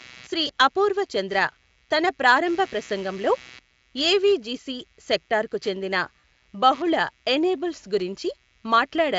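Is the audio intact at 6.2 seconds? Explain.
No. VoIP packet loss concealed by the speech codec hits from 6.19 to 6.23 s, between "ఏవిజిసి సెక్టార్కు చెందిన" and "బహుళ ఎనేబుల్స్". About 40 ms of audio went missing, which fits two lost 20 ms packets. The decoder filled the gap by extending its last pitch and filter settings while lowering the gain, so the sound smears into a brief buzzy tone or coloured noise that fades. Because each frame builds on the one before, the speech stays weak or distorted for tens of milliseconds or more just after the gap.

Computer activity noise also sits under this moment, as it does across the whole clip. Load changes in the machine disturb the audio circuit's shared ground, producing a buzzy, chirping texture pulsing at roughly 150 Hz, about 30 dB below the speech. It follows the computer's activity rather than the speech, so it continues straight through the concealed gap.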